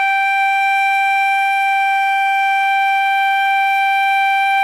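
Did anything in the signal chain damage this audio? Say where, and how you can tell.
No, nothing along the chain from capture to playback audibly damages this music, and the sound stays continuous and consistent throughout.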